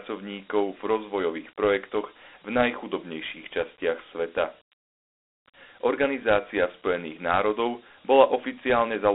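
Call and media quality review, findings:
Gritty hiss riding on the speech throughout; thin telephone band, 250 Hz to 3.7 kHz, nothing above 3.9 kHz. Dialogic VOX ADPCM in the storage or playback path: coarse 4-bit adaptive quantising steps, and the 32 kbps rate fits 8 kHz sampling.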